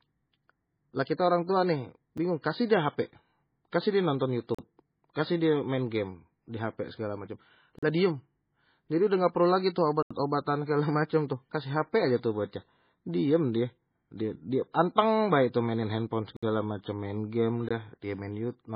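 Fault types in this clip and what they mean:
MP3 compression: The speech has nothing above 5 kHz, so it sounds dull and boxed in. The damage is heavy. The sound turns watery and swirly, and sibilants break into metallic chirps. Consonant attacks smear instead of landing cleanly. This is likely MP3 coding at a very low bitrate, which fits something near 16 kbps. The encoder runs short of bits, cuts the treble and drops weak detail from frame to frame.
Block of digital silence: The audio drops to silence and returns with no fade, so each hole has hard edges. The shortest is a tick at 2.18 s, right after "kita orang tua nih". Longer holes open at 4.55 s for 40 ms and at 7.79 s for 40 ms, after "di hp segala macem". At 10.03 s an 80 ms gap sits between "dah perlu lagi itu" and "segala macem tuh kasih". Two more follow at 16.37 s for 60 ms and 17.69 s for 20 ms.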